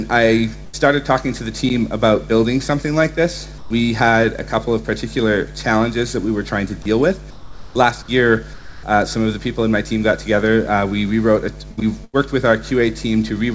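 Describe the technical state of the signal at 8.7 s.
At 8.7 s the background is replaced by comfort noise, from 8.53 to 8.83 s. For those 300 ms the real background, about 20 dB below the loud parts, gives way to a steady, featureless hiss about 4 dB quieter, likely from discontinuous transmission with receiver-synthesised noise. The noise sits within the 8 kHz band of the G.722 call path.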